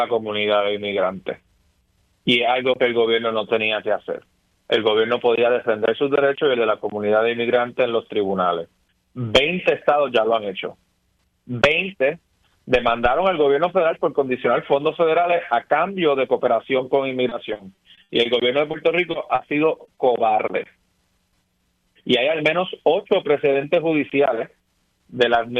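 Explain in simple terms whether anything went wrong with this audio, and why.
From 17.29 to 18.27 s there is repeated packet loss (robotic sound): seven gaps, each patched by stretching the last sound, make it choppy rather than a single blip.

Just afterwards, short concealed packet loss appears as isolated brief smears or wobbles, each 20 to 40 ms, at 18.71, 19.11, 19.35, 19.85 and 19.95 s, spaced apart instead of clustered.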